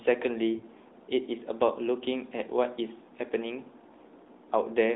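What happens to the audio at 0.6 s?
A lost AMR speech frame, from 0.58 to 0.64 s. About 20 ms of coded speech fails its checksum, which fits a single frame. The decoder repeats the last good pitch and vocal tract settings at lower gain. The speech briefly dips or warbles.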